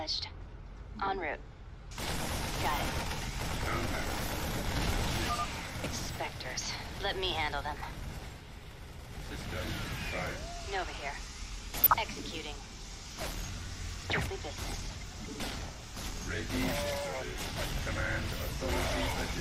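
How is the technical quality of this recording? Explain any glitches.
The recording has three short bursts of DAB burbling, at 0.99 to 1.11 s, 5.84 to 5.91 s and 11.77 to 11.96 s. Weak reception let a few tenths of a percent of bits slip past error correction. That corrupted MP2 sub-band levels frame by frame, so the sound briefly burbles, with short noise blips and level jumps in single sub-bands.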